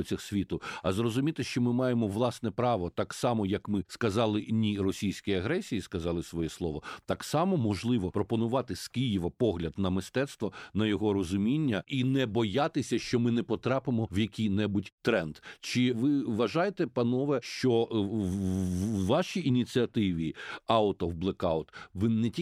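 No technical faults can be heard anywhere in the recording.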